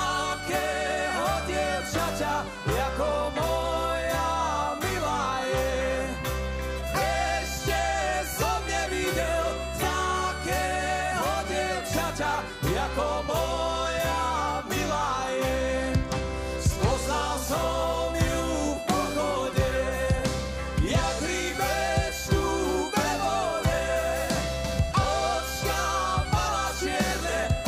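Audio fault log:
No faults heard anywhere in this recording.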